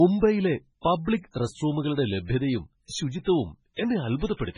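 Throughout, heavy MP3 compression is likely: the speech sounds watery and swirly, consistent with a very low 16 kbps stream. A spectrogram shows a hard ceiling near 10.2 kHz, with flickering gaps below it.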